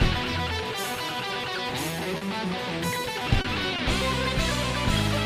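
Short stalls from a late packet occur at 2.03–2.08 s, 2.17–2.24 s, 3.41–3.47 s and 3.76–3.81 s. Each time the jitter buffer ran dry, and the receiver held the last sound for about 20, 40, 30 and 20 ms before resuming. Nothing is skipped, but each moment drags with a faint buzz or dip.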